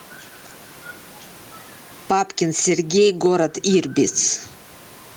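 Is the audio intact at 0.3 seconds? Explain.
No, gain pumping runs throughout, including 0.3 s: likely excessive input gain with a fast limiter, so the gain swings by around 15 dB.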